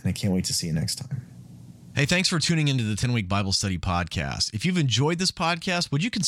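At 3.02 s, just after "for tuning into the", one Bluetooth LE Audio frame was lost, leaving a 10 ms gap that the LC3 decoder filled by repeating the previous spectrum with scrambled signs. The speech briefly turns into a noisy smear.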